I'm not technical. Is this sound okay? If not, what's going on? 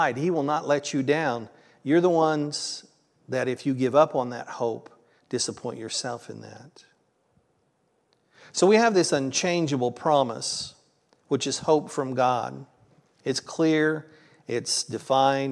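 Yes, nothing in the signal suggests a technical problem.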